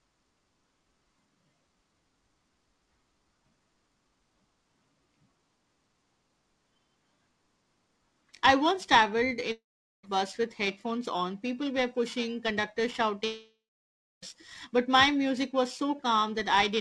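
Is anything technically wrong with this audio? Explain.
Yes, two faults are audible in this speech clip.

Periodic clock jitter runs through the whole clip. The converter's sampling clock is being disturbed at a steady rate of around 2 kHz, so every part of the signal picks up sidebands at about that spacing. Higher-frequency content is affected more strongly, which gives the voice a rough, metallic edge that disappears in pauses. The call path's band limit is present too: nothing reaches above 8 kHz, which fits a G.722 codec at 64 kbps.

Two long network dropouts break up the speech. The first runs from 9.52 to 10.05 s, right after "I once traveled" and before "bus with headphones on". The second runs from 13.25 to 14.24 s, right after "were pushing conductor". The likely cause is packets that never arrived. Each time, the receiver stretches the last sound into a fading buzz or hiss, which then gives way to near-silence. 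The second gap lasts about one second, roughly double the first. When the audio resumes, the speech picks up further along, with those stretches of speech simply gone.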